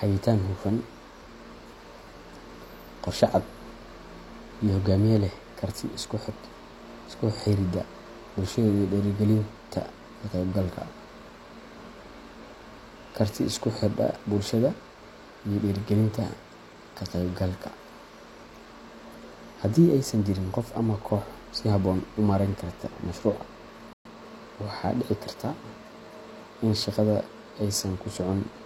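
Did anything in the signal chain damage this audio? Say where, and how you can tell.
Yes. After "karta mashruuca" the speech cuts to silence at 23.93 s for 120 ms, then resumes. This is a playback stall, likely a starved playback buffer.

From 24.05 to 24.17 s the speech rushes at twice normal speed, pitch unchanged. This is time-compressed catch-up: playback cross-fading out fragments to recover the backlog.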